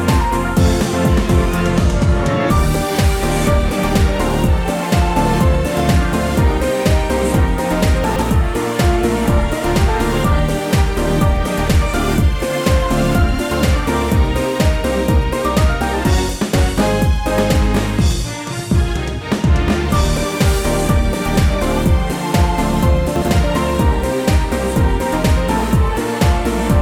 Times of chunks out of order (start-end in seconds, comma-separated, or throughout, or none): 8.04-8.22, 23.16-23.28